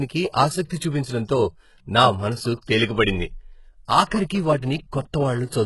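It's a speech clip with heavy HE-AAC compression damage throughout: the s sounds come out gritty and lispy, and the treble has a metallic sheen that doesn't match the voice below it, with nothing at all above 11.5 kHz. That's likely copied-up band replication at a very low bitrate, something like 12 kbps.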